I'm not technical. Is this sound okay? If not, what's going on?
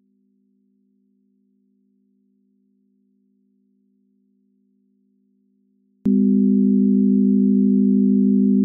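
No. From the start to about 6.06 seconds there is a 24-bit alignment error that leaves the audio far too quiet. Each sample was stored in the lower part of a larger container, and the playback side read it as if it filled the whole container, shrinking every value enormously. The sound is not distorted, just faded almost to nothing, so for those first six seconds you can barely hear it.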